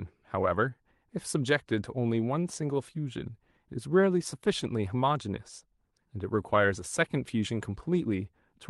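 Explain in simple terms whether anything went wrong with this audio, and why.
Nothing went wrong here.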